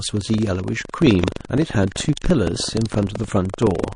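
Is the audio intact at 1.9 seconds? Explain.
No. From 1.88 to 1.92 s a short hiss runs ahead of a sharp attack, which arrives soft and smeared. This is pre-echo. The attack fell late in a transform block of about 52 ms, and no shorter blocks were switched in. Quantisation noise sized for the loud onset therefore spread 33 ms into the quiet before it, rising about 21 dB above the background.

Under that, a robotic rattle at 23.4 Hz continues through this moment. This is buffer tearing, and its rate fits a 2048-sample buffer. The writer and reader of the ring buffer cross once per period, so a small slice of each buffer replays sound from a fraction of a second earlier, with hard joins on both sides.

The speech also has a watery, swirly quality, likely from MP3 compression at a low bitrate around 40 kbps. The encoder zeroes weak frequency lines that flicker on and off between frames.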